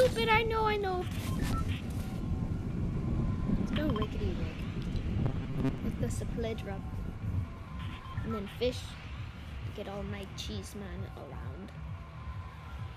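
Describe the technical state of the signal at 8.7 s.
At 8.7 s the signal is intact, with no dropout, distortion, glitch or other audible fault.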